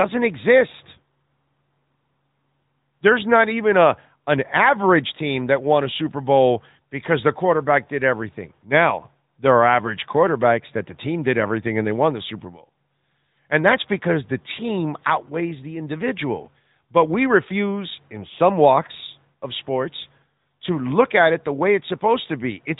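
From start to finish the speech sounds boxed-in and telephone-like, with nothing above 4 kHz and a plainly audible buzzy, synthetic edge on the voice. This is the AMR narrowband mobile codec at work: the audio is carried at 8 kHz sampling and rebuilt from a vocal-tract model excited by sparse pulses every few milliseconds, and the degree of coarseness points to a mid-range AMR-NB mode of around 10 kbps.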